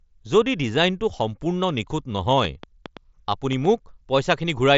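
From 2.45 s to 3.66 s a train of clicks rides over the speech: about seven similar pops at an irregular 4.2 per second, peaking roughly 5 dB above the signal. Likely electrical interference or a struggling interface, heard through the band-limited mSBC headset path.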